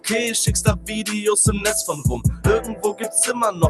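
A noise suppressor applied to music or sounds runs through the whole clip. A processor built for speech treats the steady, sustained parts of this non-speech audio as noise and pulls them down, so the level swings by around 5 dB as held material sinks and sharper onsets push back through, giving a pumping, thinned-out character. A sound cut by the noise suppressor occurs from 2.61 to 3.02 s, where the suppressor clamps harder on a sustained or decaying passage. The level falls by about 11 dB at its deepest, and roughly 300 ms of that stretch is hollowed. The top end stops near 12 kHz, which fits an Opus call codec at around 40 kbps.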